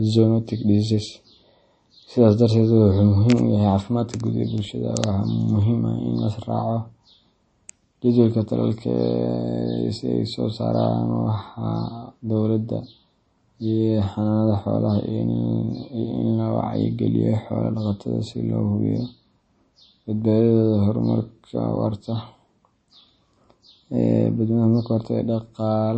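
From start to finish the speech has a watery, swirling quality, with plainly audible damage and nothing at all above about 8.4 kHz, so s sounds lose their sparkle and turn metallic. This is likely MP3 compression at a low bitrate, around 32 kbps. With too few bits, the encoder cut the treble at a fixed point and dropped weak frequency lines that flicker on and off between frames, producing that swirl.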